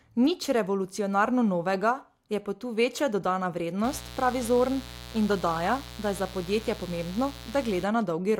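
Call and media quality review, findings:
Mains buzz, 3.84 to 7.84 s, starting right after "večja dodana". Steady raspy buzz, roughly 15 dB under the speech. Probable component: dimmer, rectifier or unshielded lead on the capture side. Switching spikes twice per 60 Hz cycle inject a harmonic series climbing into the kHz range.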